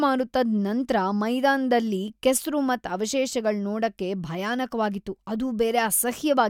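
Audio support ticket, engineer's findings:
No audible faults found in this speech recording.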